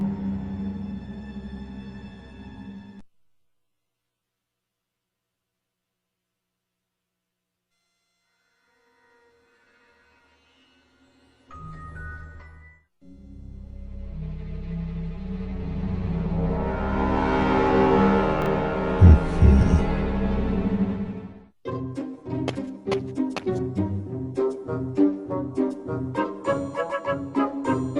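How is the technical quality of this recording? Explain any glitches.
The recording has two technical faults: a constant comb-filter colouration and one brief jumbled moment.

Channel delay with comb filtering runs throughout. One channel lags the other by roughly 10 ms, and when the two are folded to mono, the shared content cancels at evenly spaced frequencies starting around 50 Hz. This leaves fixed notches that make the sound hollow and phasey.

Chunks out of order occur from 18.42 to 18.46 s. A 20 ms block plays one chunk late, after the audio that should follow it. Nothing is missing, but the three hard joins produce a short garbled moment.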